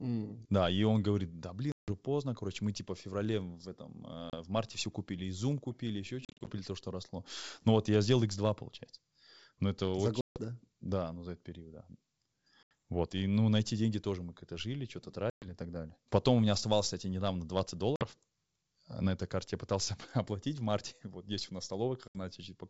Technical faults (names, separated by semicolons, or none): packet loss on an ADPCM call